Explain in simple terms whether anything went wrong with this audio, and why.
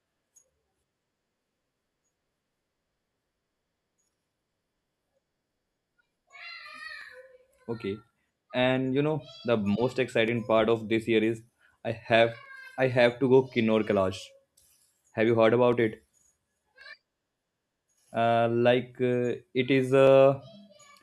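A click recurs every 1.09 s from 0.48 to 20.07 s in the speech, likely clock drift buffer slips. Its steady rhythm distinguishes it from random dropouts.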